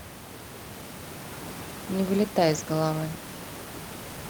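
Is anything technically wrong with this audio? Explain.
No, nothing in this speech recording points to a technical fault. The room's background noise can be heard sitting about 12 dB below the speech, which is part of the recorded space and not a problem with the system.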